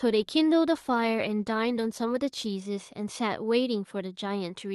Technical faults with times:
0.78-2.57 call bitrate drop

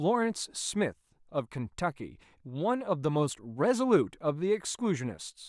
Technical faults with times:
none

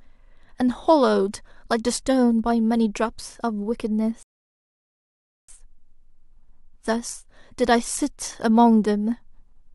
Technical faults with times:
4.23-5.49 rebuffering stall

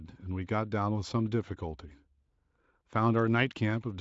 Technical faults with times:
none

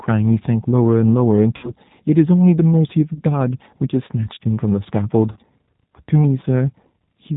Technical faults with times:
0.00-7.36 G.729 codec
1.57-1.71 VoIP packet loss concealed by the speech codec
3.14-3.21 VoIP packet loss concealed by the speech codec
5.32-5.37 VoIP packet loss concealed by the speech codec
6.89 VoIP packet loss concealed by the speech codec

